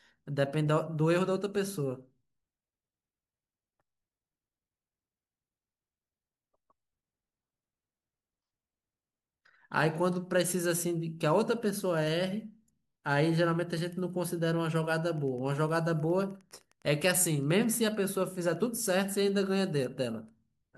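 From 15.01 s to 19.40 s a faint, regular ticking runs beneath the speech at about ten clicks a second. This is Wi-Fi interference: a nearby radio's beacon, sent every 102.4 ms, is rectified by the audio circuitry and leaks in as pulses.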